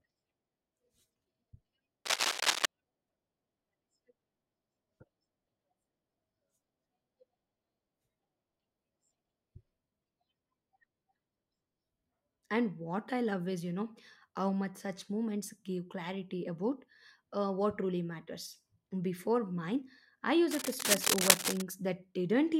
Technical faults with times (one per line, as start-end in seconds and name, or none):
2.05-2.65 cable scratch noise
20.50-21.62 cable scratch noise